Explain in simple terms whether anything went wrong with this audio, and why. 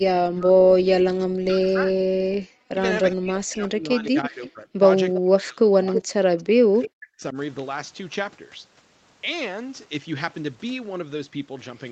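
The speech keeps sinking away and returning, sometimes nearly vanishing, in three stretches: 0 to 2.21 s, 2.52 to 4.81 s and 5.18 to 7.36 s, with about a second and a half of each affected. This is speech suppressed in double talk, likely because the call's echo canceller heard both sides at once and turned everything down.

A faint, delayed repeat of the speech, trailing it by about a third of a second, slips through at 4.05 to 4.47 s, briefly at 5.15 s and 5.96 s (the second nearly as loud as the speech itself), and at 6.42 to 6.90 s. This echo leak likely comes from a loudspeaker's sound reaching the microphone and not being fully removed.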